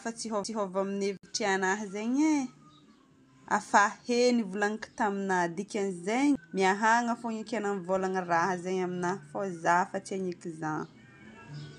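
At 0.44 s there's a CD skip: the laser hops to another turn of the disc's spiral, so the speech mutes very briefly and resumes elsewhere. From 1.17 to 1.23 s a gap at a join of encoded pieces opens a gap of about 62 ms, with smeared edges, left by untrimmed encoder delay and padding. Another CD skip hits at 6.35 s.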